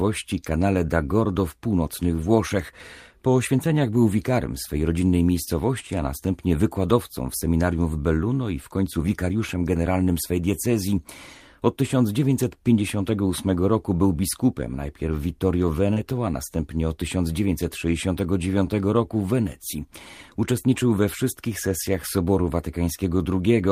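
At 15.93 to 16.03 s, just before "a następnie od", short concealed packet loss smears the speech: missing audio was filled by extending the preceding sound, not left silent like a dropout.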